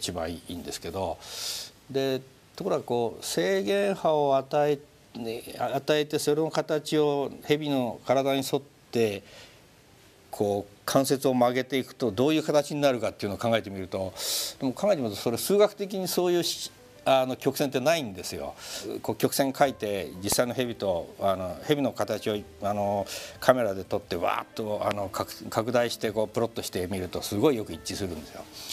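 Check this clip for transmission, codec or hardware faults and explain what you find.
There's one kind of fault here, a loud pop, heard twice. At 20.32 s and again at 24.91 s, a sharp click or thump lands on top of the audio, peaking about 15 dB and then about 20 dB above it. Each is most likely a brief voltage spike from a plug, switch or static discharge that gets added to the signal, while the sound carries on underneath.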